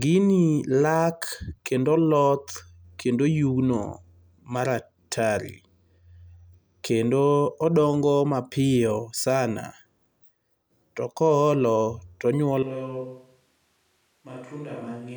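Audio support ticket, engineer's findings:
Sudden hollow, roomy sound from 12.63 s to end, level down roughly 10 dB, more room noise. Likely a switch to a distant microphone; close mic lost.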